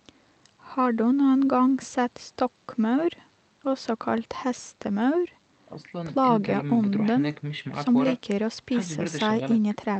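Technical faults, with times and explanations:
No technical faults can be heard in this speech.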